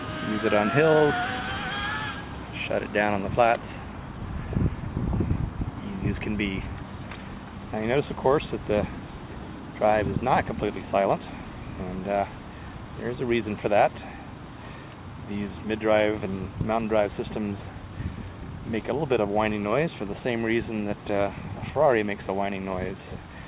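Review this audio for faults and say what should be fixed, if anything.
Nothing here needs fixing; I listened all the way through and didn't hear a single problem worth flagging.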